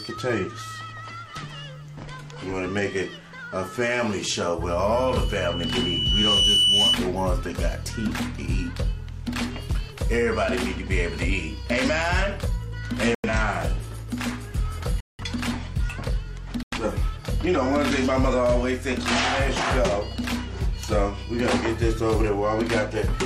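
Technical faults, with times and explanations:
4.95–6.98 s, loudspeaker feedback squeal: a 3 kHz tone swells over roughly 1.5 s to about 5 dB above the sound, drawn as a brightening horizontal spectrogram line.
13.15–13.30 s, 15.00–15.24 s, 16.63–16.78 s, corrupt frame muted: rejected compressed frames were replaced by silence, giving abrupt flat-line waveform gaps and blank spectrogram columns, which fits three or four frames each.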